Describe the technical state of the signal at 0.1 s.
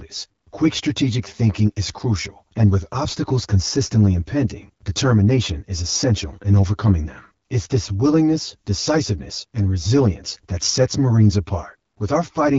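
Channel delay (comb filtering) runs throughout, including 0.1 s: one channel lags around 10 ms before mono summing, notching evenly spaced frequencies from about 50 Hz, sounding hollow.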